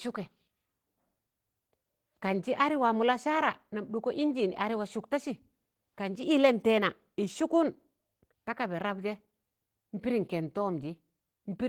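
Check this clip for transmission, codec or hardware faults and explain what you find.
One codec fault runs through the whole speech clip: Opus voice compression. The lower band is coded by SILK linear prediction and the band above 8 kHz by a thin CELT layer, which fits a hybrid mode at roughly 16 kbps. The coarse excitation coding makes the voice plainly hoarse and slightly robotic. Content reaches about 20.1 kHz, so this is coarse coding rather than band-limiting.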